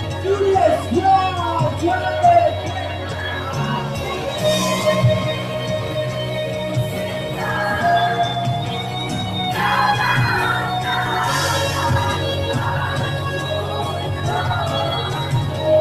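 Throughout the clip, a noise suppressor applied to music or sounds, a processor built for speech, is treating sustained tones, ambience and decaying tails as noise. Onsets mostly get through, but held material and reverb sink by around 5 dB moments later, so the sound flutters and thins. Compressor pumping would track overall loudness. Here the dips follow how steady the sound is, and loud sustained passages still get pulled down.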